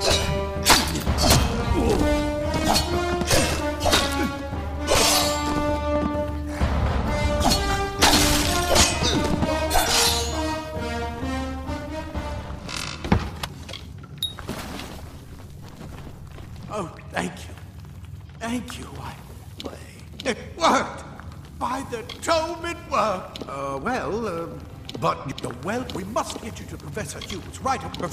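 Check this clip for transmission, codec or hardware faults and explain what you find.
Nothing here points to a problem on the transmission, codec or hardware side; it all sounds as it should.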